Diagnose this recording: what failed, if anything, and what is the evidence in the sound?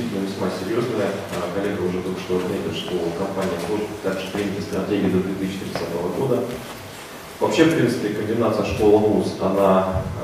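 Nothing in the recording stood out on listening as a failure at any stage of the chain.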